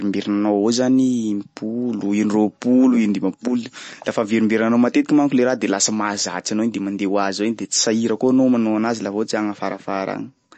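A speech recording that was likely squeezed through MP3 compression at a bitrate starved enough to fit roughly 36 kbps: the encoder discards everything above about 8.3 kHz and drops weak frequency lines frame to frame, so the whole clip sounds dull, watery and swirly, with s sounds turning metallic and smeared.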